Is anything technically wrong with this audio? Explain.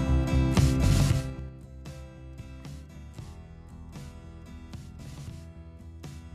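Yes, there's zipper noise between 1.02 and 1.58 s. The level drops by roughly 20 dB there, but instead of gliding down it's applied in hard 3 dB jumps, about ten a second, with no smoothing between them. Each jump leaves a small click, so you get a ticking, zippery texture riding on the sound while the level falls.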